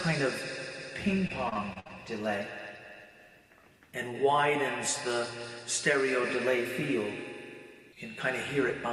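Between 1.27 and 1.91 s the audio breaks into repeated packet loss with a robotic sound: about a quarter of that stretch is patched by extending the preceding sound across six holes of up to 57 ms. Unlike one dropout or silent gaps, the holes recur and are filled, giving a choppy texture.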